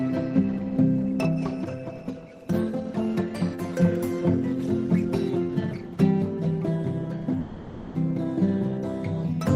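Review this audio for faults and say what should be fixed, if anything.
From 7.40 to 7.96 s the music becomes a repeated, fading buzz, likely a long network dropout the receiver concealed; the spectrogram shows frozen, smeared bands. A deeper jitter buffer with forward error correction would prevent it.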